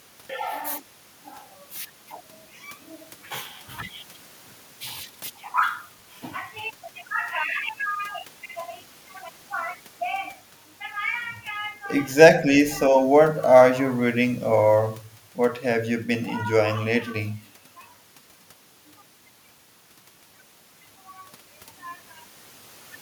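From 12.89 to 12.97 s the speech briefly sinks by around 5 dB, heard as a short, soft duck. The waveform narrows there, and the spectrogram fades across the band. The likely cause is speech suppressed in double talk: an echo canceller, confused by overlapping talk, attenuated the near-end voice along with the echo.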